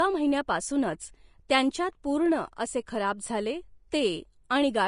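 Throughout the clip, the speech has most likely passed through Vorbis compression at a low quality setting, which fits a bitrate of around 34 kbps. At that setting the encoder keeps only a smooth outline of the spectrum and quantises the fine detail above it so coarsely that the treble turns into noise of similar energy. Nothing remains above 10.5 kHz, and the damage is plainly audible as a hissy, grainy top end, roughened tones and blurred attacks.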